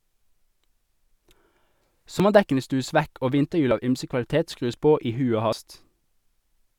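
At 2.20, 3.71, 4.74 and 5.53 s the speech skips forward, the audio on either side joined directly with no silence between. Each is likely a dropped buffer (overrun): the samples were not read out before the hardware overwrote them, so that stretch of sound is simply gone. The jumps are short, around 70 ms at 2.20 and 5.53 s, roughly 40 ms at 4.74 s and about 20 ms at 3.71 s.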